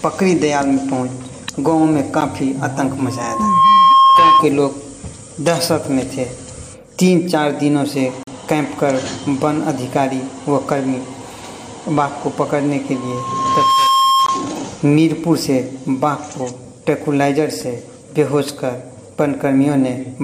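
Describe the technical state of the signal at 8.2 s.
From 8.23 to 8.28 s the sound drops into a hard-edged silent hole, a gap between stream segments: mismatched timestamps leave roughly 40 ms that the player fills with silence.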